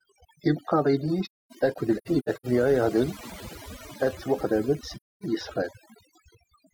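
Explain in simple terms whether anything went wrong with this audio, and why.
Yes. Overdone noise removal affects the whole recording. A cleanup tool was set too strong. It cut sound near its idea of the noise, and quiet parts of the speech went too. The background drops and breaks up into twinkling specks.

AAC frame loss with muting causes gaps. From 1.25 to 2.46 s, small pieces drop out, totalling about half a second. The longest gap is about a third of a second. Another gap runs from 4.96 to 5.23 s. The player filled lost data with silence, so the sound fades softly out and back in.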